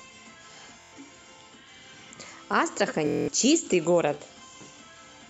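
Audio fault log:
0.81–0.93 s, Bluetooth stutter: about 116 ms of lost audio, consistent with roughly five dropped packets, refilled by looping the last short slice. This gives a buzzy repeat, seen as comb-like vertical striping on a spectrogram.
3.07–3.28 s, Bluetooth stutter: a longer 209 ms gap, suggesting about nine missing packets, replayed as a machine-gun loop. The waveform shows identical repeating segments before the sound resumes further on.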